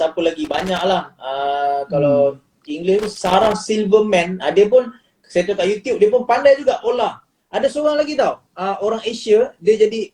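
Two bursts of loose connector crackle break up the audio, from 0.45 to 0.81 s and from 2.99 to 3.52 s, lasting roughly 0.4 and 0.5 s. A worn or dirty contact is making and breaking intermittently, chopping the signal into an irregular scratchy rattle. On a waveform each burst shows as ragged dropouts and sharp spikes. A spectrogram shows scattered vertical broadband streaks across the full frequency range, clustered only within those two windows.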